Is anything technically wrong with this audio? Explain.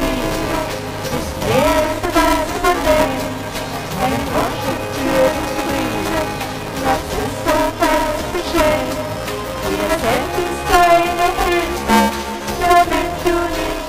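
Yes. Buffer tearing runs through the whole clip. The writing side and the playback side of the ring buffer have drifted so that they cross partway through each period. Roughly half of every buffer replays audio from about ten milliseconds earlier, spliced in with hard joins. The result is a continuous robotic buzz at 345 Hz, which fits a 128-sample buffer, and it is heard only while sound is present. A spectrogram shows evenly spaced vertical lines at that rate, and the waveform shows repeated sharp discontinuities.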